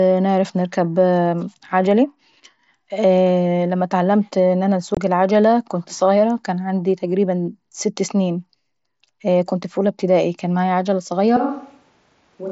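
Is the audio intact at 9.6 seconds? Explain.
No. At 9.63 s there is a single hole of about 7.5 ms, which fits one lost packet on the headset link. This is unconcealed Bluetooth headset packet loss. The packet carrying that slice of speech never reached the phone, and nothing was synthesised to cover the gap. The sound drops to silence or an idle pattern and resumes with hard edges. The surrounding mSBC wideband audio carries its usual light graininess.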